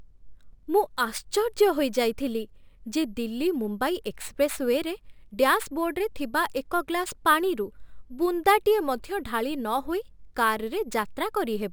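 Imaging from sample-and-hold upsampling throughout: a metallic fizz from 12 to 24 kHz, about 23 dB down, which fits 24 kHz audio doubled by repeating samples.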